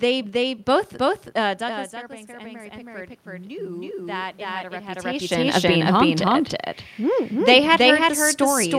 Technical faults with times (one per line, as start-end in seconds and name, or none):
0.00-8.79 doubled audio track
1.66-5.29 automatic gain rising